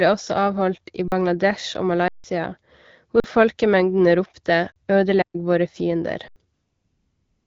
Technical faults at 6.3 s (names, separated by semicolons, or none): underrun with held sample